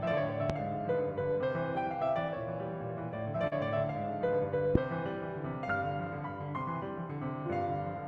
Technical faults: loud pop; short concealed packet loss

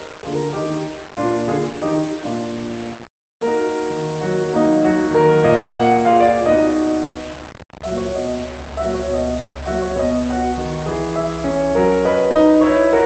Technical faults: low bit depth without dither; long network dropout; burst of packet loss; short concealed packet loss

